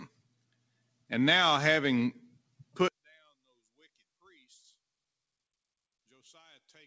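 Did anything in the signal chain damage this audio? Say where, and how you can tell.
Yes. The call processing left a speech-style noise suppressor on across this audio. It treats the held, steady material as noise, so the level swings by about 10 dB.

That same suppressor cuts sound hard from 0.08 to 1.11 s and again from 2.24 to 2.78 s, with drops of about 19 dB where the sustained parts sink.

From 2.88 s to the end, the summed level falls by about 33 dB into a faint residue. That's likely one channel inverted somewhere in the wiring or driver, cancelling everything common to both sides.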